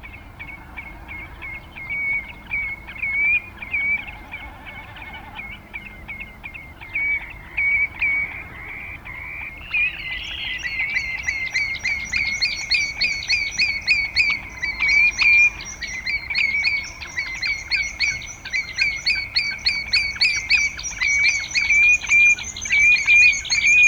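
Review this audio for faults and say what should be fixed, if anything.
No faults heard; nothing needed.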